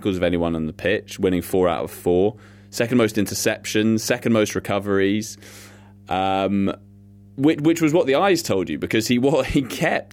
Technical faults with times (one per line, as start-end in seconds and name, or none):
0.00-10.13 mains hum